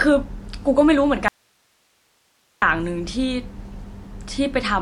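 Speech with plainly audible damage that is likely from MP3 compression: the sound is watery, with swirling artefacts. On a spectrogram, everything stops at a flat ceiling near 11.3 kHz, and weak high components flicker on and off, which fits a low bitrate of around 50 kbps. An audio dropout to a faint residue, likely a break in the signal path, then runs from 1.28 to 2.62 s, lasting 1.34 s. The waveform collapses abruptly to a thin band of hiss roughly 45 dB below the speech, shown as a near-empty vertical gap on the spectrogram.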